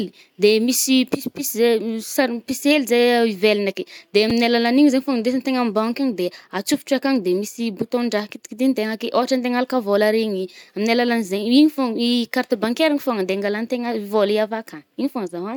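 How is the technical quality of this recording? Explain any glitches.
The recording has one glitch. Chunks out of order at 4.30 s: a 5.33 ms block of speech arrived one chunk late and played after the next one, leaving three hard joins heard as a brief jumbled moment.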